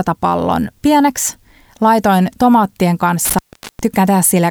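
At 3.25 s, just after "pieneksi laitoin tomaattien", the speech drops out. This is an intermittent contact: a loose plug or cable briefly opens. Crackle marks both edges. For about 0.41 s only faint hiss remains. Sound returns at 3.79 s.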